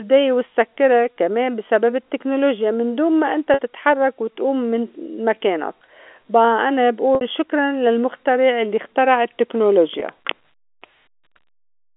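At 3.54 to 3.59 s, 7.15 to 7.21 s and 10.0 s, packet loss with pitch repetition fills each gap with the previous pitch period, giving a brief held, buzzy note over the telephone-band speech, though at 7.15 s the longer gap fades into silence before the speech returns with a short cross-fade.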